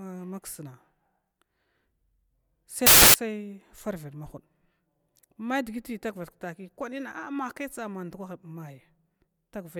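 A speech clip in which, from 2.87 to 3.14 s, the reader assembles samples from the wrong bytes, misaligned or swapped, so each sample's fast-changing low-order bits land in the high-order position. For that quarter second the sound turns into loud, harsh broadband noise.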